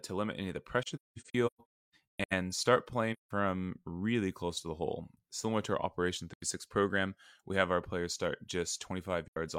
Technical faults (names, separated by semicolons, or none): AAC frame loss with muting